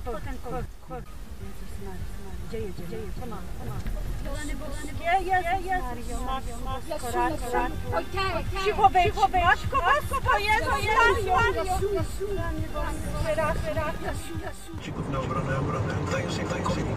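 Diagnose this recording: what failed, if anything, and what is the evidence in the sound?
A clean full-band repeat trails throughout, roughly 0.4 s behind and a few dB quieter: a doubled audio track, likely a slower second capture path.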